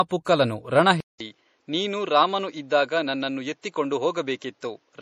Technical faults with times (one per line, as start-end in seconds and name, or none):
0.00-5.02 low-bitrate audio saved at a high bitrate
1.00-5.02 input switched to a poorer device